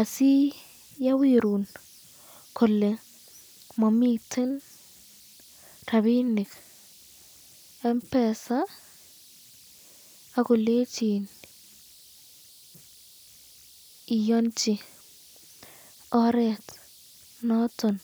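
An undithered delta-sigma converter settles into repeating bit patterns, producing converter idle tones throughout: a faint whistle around 4 kHz, about 31 dB below the speech.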